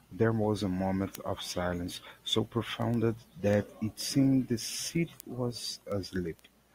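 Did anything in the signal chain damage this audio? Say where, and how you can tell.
Yes. A digital link between two devices was read by a receiver running on its own clock rather than locked to the sender's, so word clock ticks run through the speech from 0.2 s to 6.63 s. They come at a steady pace of about ten per second, around fifty in all, which fits a single sample being slipped at each crossing and a clock mismatch of a couple of hundred parts per million.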